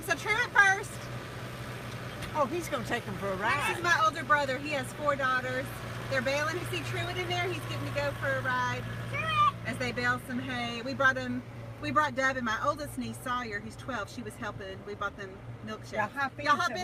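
At 6.61 s the audio lurches forward with no gap, as if a short piece were snipped out and the ends butted together. This is a skip ahead: roughly 0.4 s of audio was discarded in transit or by an overflowing jitter buffer, and playback resumed from later material.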